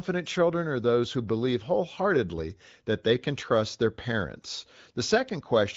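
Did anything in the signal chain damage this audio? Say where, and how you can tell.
No, nothing in the chain damaged this speech; the only stage leaving a mark is the AMR wideband (HD Voice) codec, and at around 15.85 kbit/s its coding is light, well above the low rates where it turns rough.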